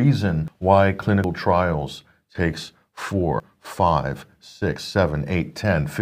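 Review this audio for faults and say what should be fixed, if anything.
The speech jumps ahead abruptly four times, at 0.48 s, 1.24 s, 3.4 s and 4.76 s, with no gap of silence. Roughly a tenth of a second goes missing at the first and third, a bit less at the second and only a few hundredths at the fourth. This is likely a dropped buffer (overrun): the capture software fell behind, the hardware overwrote unread audio, and the surrounding sound was spliced together. Larger capture buffers and a higher-priority recording thread would prevent it.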